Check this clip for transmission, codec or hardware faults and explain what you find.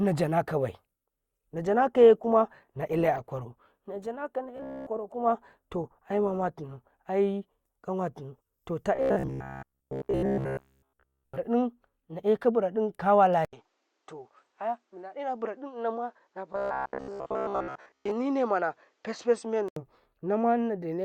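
Three kinds of fault are audible in this speech: a stretch of reduced streaming quality, three bursts of robotic buzzing, and a change to a duller input near the end.

Adaptive stream at a lower bitrate, 0.92 to 6.92 s. The quality steps down abruptly with no gap, as the player switches to a cheaper version of the stream when the connection slows. The detail thins and codec artefacts rise, which fits a drop from Opus at about 64 kbit/s to about 24 kbit/s. Quality returns just as suddenly at 6.92 s.

Robotic sound from repeated short buffers, at 4.57 to 4.87 s, 8.95 to 11.37 s and 16.53 to 18.11 s. The speech turns into a rigid metallic buzz at 66.8 Hz that still roughly tracks the syllables. The likely cause is audio arriving too rarely, with the playback filling each gap by looping the last fragment, which fits a buffer of about 15 ms. The first two bursts are almost entirely looped, while the last is mostly looped.

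Input switched to a poorer device, 13.45 to 19.76 s. An 80 ms silence marks the switch, and then the sound becomes duller. The level drops by about 5 dB and a new noise floor appears, about 50 dB below the speech. This is likely a change to a narrower-band microphone or a headset call profile. The third robotic burst falls within this stretch.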